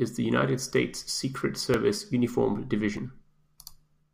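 A little skip in the speech at 0.94, 1.74 and 2.97 s, likely a dropped buffer (overrun), losing roughly 10, 10 and 30 ms.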